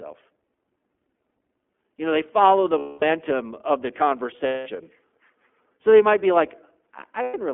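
The whole clip carries the iLBC codec sound. The speech is confined to a narrow telephone band, from 200 Hz up to 3.4 kHz. Each 20 ms frame is coded on its own. The damage is plainly audible, a rough, slightly synthetic edge that fits the 15.2 kbps mode.

Lost iLBC frames break the speech three times: 2.78 to 3.04 s (240 ms), 4.46 to 4.70 s (200 ms), and 7.22 to 7.36 s (120 ms). Each time the decoder repeats the last pitch cycle with added noise, fading it as the loss goes on. The gaps sound like a held, buzzy vowel. Clear speech returns almost at once.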